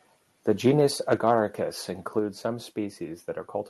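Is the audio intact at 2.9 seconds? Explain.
Yes, the speech at 2.9 seconds is intact, with no dropout, glitch or other fault at that moment.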